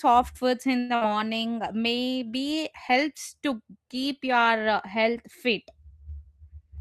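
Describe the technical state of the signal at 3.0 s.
At 3.0 s the speech signal is intact, with no audible fault at that moment.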